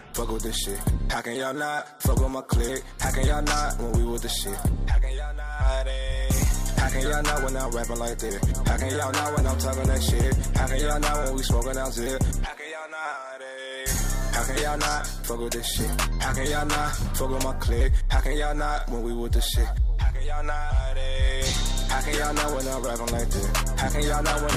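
No technical fault can be heard anywhere in this audio. The sound stays steady throughout, with nothing that calls for a time or a cause.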